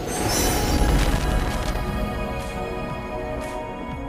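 A worn or dirty contact somewhere in the signal chain was making and breaking as it shifted, and from about 0.68 s to 1.77 s that shows up as loose connector crackle. Each momentary break chops the audio, and any DC standing on the line jumps as the contact closes and opens, so the sound is overlaid for just over a second by an irregular, scratchy burst of crackle and pops rather than a steady noise.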